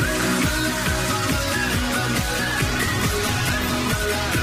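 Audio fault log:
2.33–4.43 s: call bitrate drop. The encoder was pushed to far fewer bits, which fits a fall from 128 kbps to about 12 kbps. Coarser coding and lost high frequencies degrade the sound, with no recovery before the clip ends.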